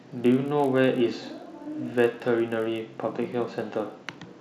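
From the first moment to the end there's a buzz riding on the speech, and that's the resampler restarted on every block. The 48 kHz to 24 kHz conversion was done on 20 ms chunks in isolation, so each chunk edge got the wrong neighbouring samples and a tiny error. Those errors land 50 times a second, which fuses into a low buzz that only shows up while there's signal underneath.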